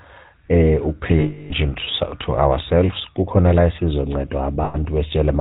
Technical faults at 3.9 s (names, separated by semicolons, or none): GSM full-rate codec